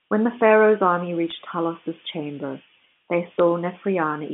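Flipped bits on the digital phone line, bit errors at a rate of roughly 0.1 to 0.15 percent, corrupt isolated samples in this telephone-band speech. They give brief crackling ticks from 1.28 to 1.32 s and a brief tick at 3.39 s, just after "chamber they".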